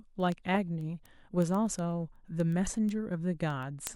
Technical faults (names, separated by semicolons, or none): word clock ticks